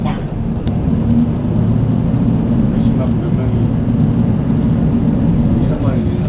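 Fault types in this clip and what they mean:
Sound dropped by the voice detector: three short gaps, at 0.18 to 0.20 s, 0.28 to 0.32 s and 0.60 to 0.66 s, where the sound gives way to steady noise, likely because the sender's detector took those moments for background and sent comfort noise instead.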